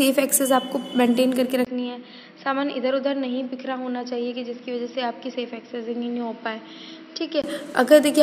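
At 1.65 s, after a 20 ms gap, the sound turns duller and boxier, drops by about 10 dB, loses everything above 5.7 kHz and gains faint new background noise, until 7.44 s. This is likely an input switched to a poorer device.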